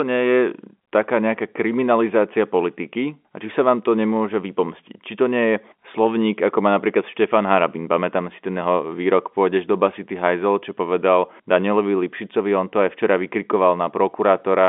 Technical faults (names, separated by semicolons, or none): none